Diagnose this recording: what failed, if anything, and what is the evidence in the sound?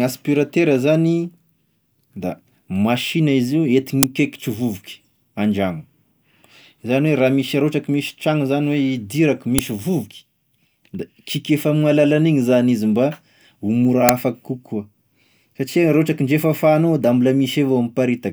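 The driver or buffer stage failed, producing an uninitialised buffer: three short, loud cracks at 4.03 s, 9.58 s and 14.09 s. The first lasts 5.8 ms, fitting a 256-sample block; the others last 2.9 ms, fitting 128 samples. Each block was played before audio was written, so leftover memory became samples. The waveform shows brief slabs of large erratic values; a spectrogram shows thin full-band vertical stripes.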